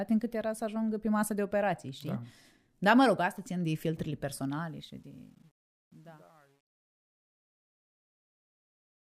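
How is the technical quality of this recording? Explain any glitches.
The recording has one fault, confined to the fade-out. From 4.50 s to 9.19 s, the speech fades out with truncation distortion on the fade. The gain stage keeps too few bits, which fits roughly 10-bit resolution, and adds no dither. As the level drops, the waveform collapses into coarse steps, so from 5.38 s to the end the tail turns gritty where a clean taper should be.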